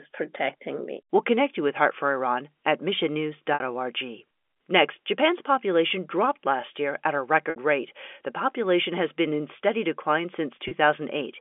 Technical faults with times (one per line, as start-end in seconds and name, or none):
3.54-3.60 packet loss with pitch repetition
7.50-7.56 packet loss with pitch repetition
10.68-10.71 packet loss with pitch repetition